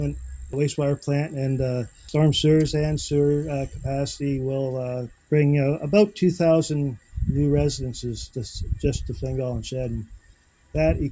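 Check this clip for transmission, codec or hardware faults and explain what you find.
Nothing here sounds wrong to me; I listened closely and there's no fault worth pointing out anywhere in the clip.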